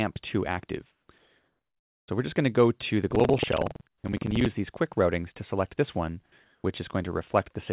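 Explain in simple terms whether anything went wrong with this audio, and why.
Several things went wrong. From 3.07 to 4.49 s there is buffer tearing: a rough, robotic buzz about 21.5 times a second, which fits a 2048-sample buffer. About a fifth of each buffer replays audio roughly a tenth of a second old.

The real background is replaced by comfort noise at 0.92–1.08 s, 1.18–2.08 s, 3.88–4.04 s and 6.44–6.64 s. Each pause becomes smooth, featureless hiss at a different level, likely from a call link that stops sending during quiet moments.

At 4.01–4.04 s the onset is clipped by the voice detector. The sound returns abruptly, with its first 30 ms missing.

The call link also removes everything above 4 kHz, which gives the audio its narrow, telephone-like tone.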